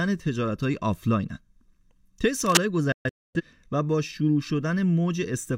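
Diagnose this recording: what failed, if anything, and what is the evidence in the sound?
Cable scratch noise, 2.40 to 2.62 s, in the analogue wiring. A dense, irregular burst of scratching rides over the speech for about a fifth of a second, roughly as loud as the speech itself. The likely cause is a worn cable, connector or control being moved, so its contact resistance jumps rapidly and injects ragged noise into the signal path before conversion. Nothing is lost from the speech; the noise is simply added on top.

Digital broadcast dropout, 2.92 to 3.41 s, at the network or reception stage. The speech cuts to silence through quick fades of about 3 ms, in several short holes spread over about 430 ms, totalling about 384 ms of missing audio, with the longest gap 256 ms. The receiver muted on corrupt or missing frames, which fits around nine lost frames, and resumed when good data returned. 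The speech sent during those gaps is gone.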